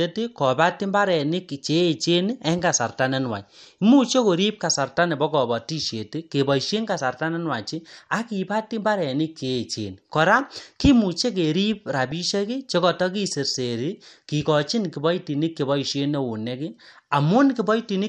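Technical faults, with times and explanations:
Throughout: MP2 compression. The speech sounds dull and plainly gurgly, with a granular edge, and that points to a likely MPEG Layer II encode at a low rate, around 80 kbps. At that rate the encoder can't feed all 32 sub-bands, so the upper ones drop out and flicker back in, while the bands it keeps are quantised coarsely. That's where the muffled top and the grainy texture come from.
12.06–12.27 s: DAB burbling. For about a fifth of a second, just before "chekoto kiserseri kikochin kiboitinik", there's a short burbling patch over the speech. Reception errors, a small fraction of a percent of bits, slipped past the error correction into the MP2 data across a short run of frames. Corrupted samples put short blips of noise into single sub-bands, and corrupted scale factors make sub-bands jump in level for up to a frame.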